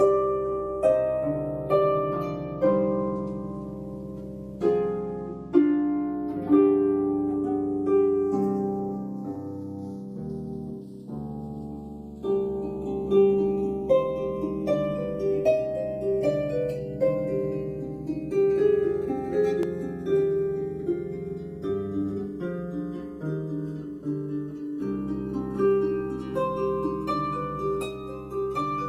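From the start and across the whole clip there is a slow flanging, a hollow sweeping colour that moves gradually through the spectrum. This is channels drifting apart. The two original channels were captured on devices running on separate clocks, off from each other by something like 30 parts per million, so the delay between them keeps sliding and reaches about 0.7 ms by the end. When the channels are summed to mono, that changing offset produces comb-filter notches that glide steadily instead of staying put.

At 9.36 s the sound abruptly jumps forward, with roughly 10 ms missing and the two sides butted straight together. At 19.63 s a similar skip occurs, this time losing only around 5 ms. Neither gap is filled with silence; the audio simply leaps ahead. The likely cause in both places is a dropped buffer (overrun), where the program failed to collect its samples before the hardware overwrote them, discarding that stretch of audio entirely.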